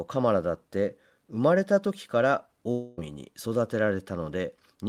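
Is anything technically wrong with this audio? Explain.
Yes. From 2.71 to 2.99 s, a long network dropout likely stopped packets arriving; the receiver filled the roughly quarter-second gap with a fading buzz, and that stretch of speech is lost.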